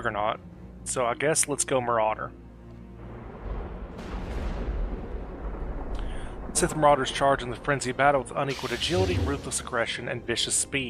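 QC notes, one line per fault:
No faults found. Nothing in the audio calls for a QC entry.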